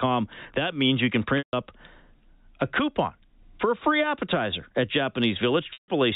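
At 1.38 to 1.53 s and again at 5.73 to 5.88 s, the speech briefly holds a buzzy tone that fades to silence before resuming. This is packet loss with pitch repetition: each 150 ms gap, consistent with about five lost packets, was bridged by repeating the last pitch period and fading it out, all over band-limited G.711 telephone audio.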